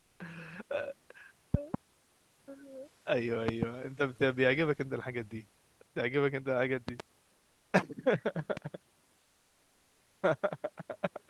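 From the start to 0.19 s, the faint room background, about 42 dB below the loudest speech, gives way to a smooth, featureless hiss about 1 dB quieter. This is comfort noise in place of the background. The likely cause is the Opus codec's discontinuous transmission: the sender went quiet during the pause, and the receiver filled the gap with synthetic noise shaped roughly like the real room.

Sharp pops then land on top of the speech, which carries on underneath. There is a pair between 1.54 and 1.77 s, another pair between 3.48 and 3.65 s, a third pair between 6.89 and 7.02 s, and a single pop at 8.57 to 8.59 s. The early pairs stand far above the speech, and the last pop is the mildest. Each loud pop is likely a sudden voltage step or pulse, from a plug, a switch, static or a driver glitch, that entered the signal chain and was shaped by the circuits after it.

From 9.19 to 10.21 s the same thing happens again, lasting about a second. 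The background, about 41 dB below the loudest speech, turns into flat synthetic comfort noise about 2 dB quieter than the real room. This happens while the call path passes audio up to about 12 kHz.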